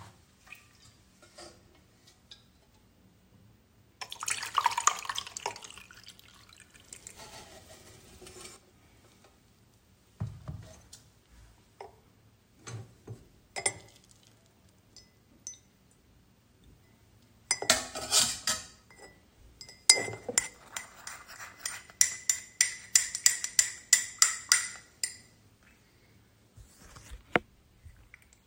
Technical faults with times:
6.74-8.56 doubled audio track

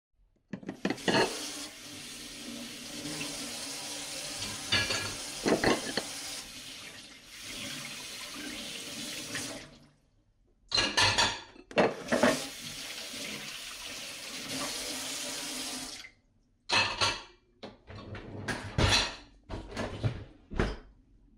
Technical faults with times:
5.44-5.93 DAB burbling
15.02-15.29 DAB burbling
19.14-19.80 DAB burbling

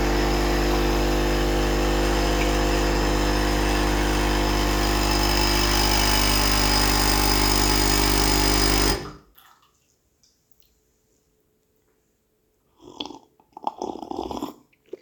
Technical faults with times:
none

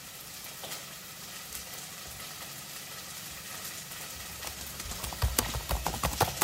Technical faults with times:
0.00-6.43 sample clock jitter

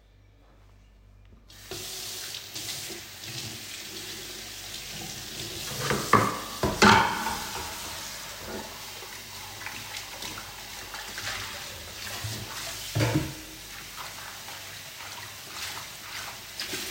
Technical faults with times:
none

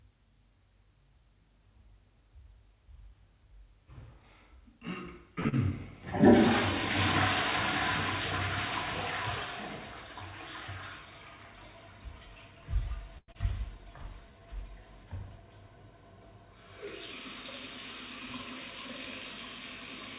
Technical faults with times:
5.40-5.47 short stall from a late packet
5.49-5.54 short concealed packet loss
12.11-13.17 jitter buffer speed-up
13.18-13.36 long network dropout
13.65-14.40 jitter buffer slow-down

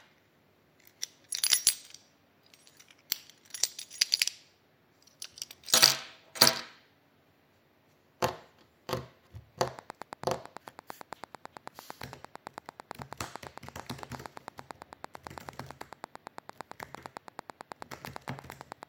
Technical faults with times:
9.68-18.84 train of clicks

